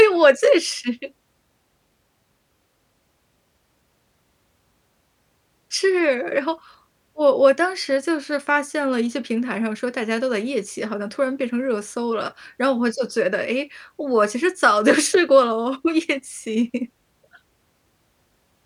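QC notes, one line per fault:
No audible faults found.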